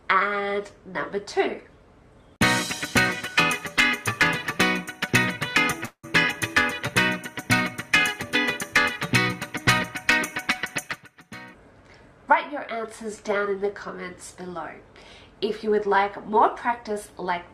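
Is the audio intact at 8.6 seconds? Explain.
Yes, the audio is intact at 8.6 seconds, with no dropout, click, distortion or other fault audible at that moment.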